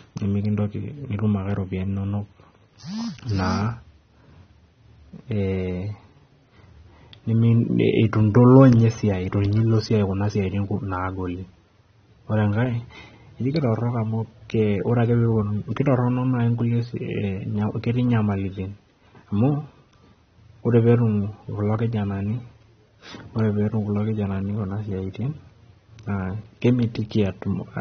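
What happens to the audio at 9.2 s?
At 9.2 s, as across the whole clip, the speech carries AAC compression damage: nothing survives above 6.3 kHz, and sibilants sound dull, smeared and fizzy. This likely comes from AAC-LC coding at a low bitrate, which fits roughly 24 kbps.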